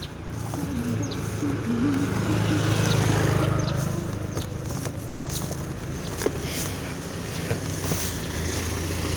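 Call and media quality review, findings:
Sound dropped by the voice detector at 0.27 s and 5.07–5.25 s: content cut out, replaced by flat low-level noise, visible as a featureless band; likely Opus DTX misclassifying sound as background.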